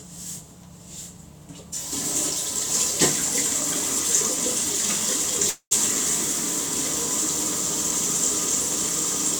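At 5.49 s the audio freezes for about 0.24 s, a call audio freeze. The last sound stretches into a fading buzz, then about 100 ms of silence. Packets were likely delayed and the jitter buffer emptied. Playback resumes unbroken, about 217 ms late.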